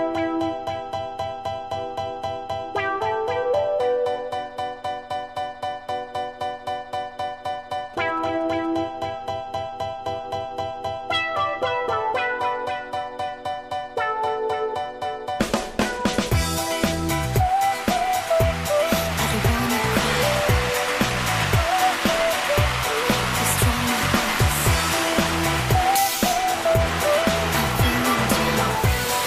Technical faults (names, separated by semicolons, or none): GSM signalling bursts